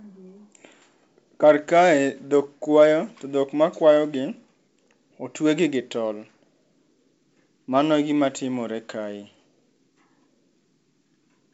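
No technical faults are audible in this speech recording, which carries the wideband telephone bandwidth of G.722 coding at 64 kbit/s, with any coding effect no more than faint.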